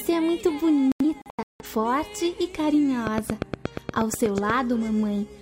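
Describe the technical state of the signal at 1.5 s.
A digital broadcast dropout runs from 0.92 to 1.65 s, so 1.5 s falls inside it. The receiver mutes whenever frames fail to decode, leaving scattered silent holes totalling 384 ms, the longest about 171 ms, with the missing sound lost outright.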